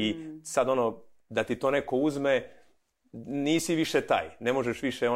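Listening through this speech recording, nothing technical stood out at any point.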